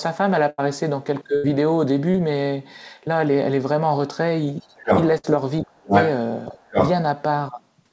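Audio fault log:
0.50–0.60 s, 1.36–1.46 s, 5.18–5.26 s: burst of packet loss. The sound freezes into a fading held buzz or hiss, then jumps ahead. About 60 to 80 ms of audio was lost and filled in by the receiver each time.
2.12–2.16 s: short concealed packet loss. A brief smear or wobble appears where about 20 ms never arrived in time and the decoder stretched the preceding sound over it.
4.61–4.65 s, 5.65–5.92 s, 6.51–6.76 s: speech suppressed in double talk. The talker's level dips sharply, by roughly 20 dB and at worst around 35 dB. The likely cause is an echo canceller ducking both sides while they overlap.
4.61–5.03 s, 5.90–6.10 s, 6.72–6.90 s: other side's voice leaking through. A second voice intrudes at roughly the talker's own level, likely from loudspeaker sound the echo canceller failed to remove.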